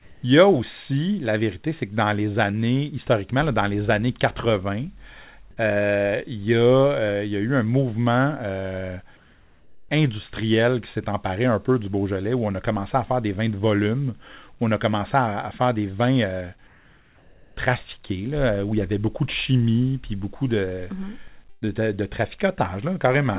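From 0 to 0.23 s, 9.17 to 9.89 s and 16.67 to 17.57 s, the background becomes steady, featureless hiss. This is likely comfort noise in place of the background, inserted during detected pauses. The first stretch differs in level by about 6 dB, the last by about 2 dB.

At 21.5 to 21.65 s comes a burst of packet loss. The last sound is stretched and fades over about 120 ms. Then the audio resumes, with that stretch missing.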